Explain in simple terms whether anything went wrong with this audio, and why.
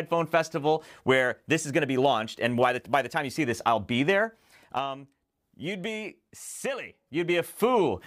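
Something did go wrong. Between 4.09 and 5.02 s, as the sound gets quieter, a fine ticking or zipping rides on top of it. The same thing happens between 6.78 and 7.62 s as it gets louder again. This is zipper noise. Instead of gliding, the volume moves in small jumps, about ten a second, and each sudden jump leaves a tiny click. Strung together, those clicks make the zipping sound.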